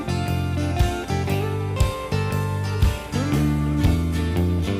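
No faults detected across the clip; the audio runs without any audible disturbance.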